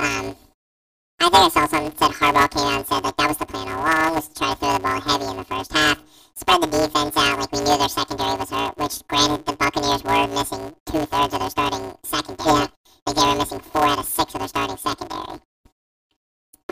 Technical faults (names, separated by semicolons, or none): planar audio read as interleaved